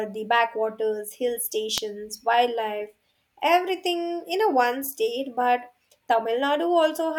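At 1.78 s a single sharp snap sits on top of the speech, peaking close to full scale, most likely an electrical switching spike from a nearby switch arcing into the audio line.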